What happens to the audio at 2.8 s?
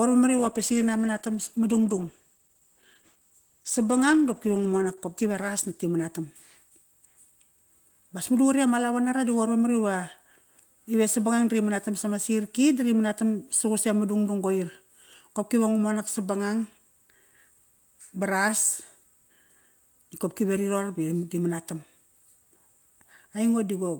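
At 2.8 s you're inside a call bitrate drop, 0.39 to 7.35 s: the encoder fell from 32 to 13 kbps, so speech turns coarse, watery and muffled.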